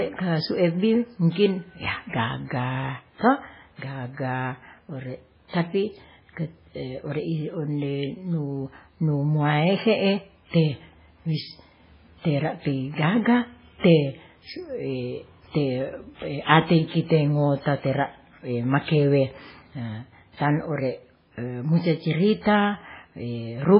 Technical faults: MP3 compression

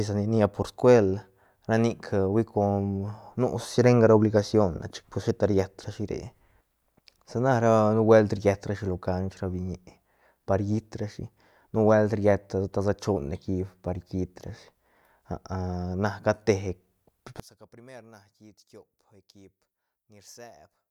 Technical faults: one channel inverted

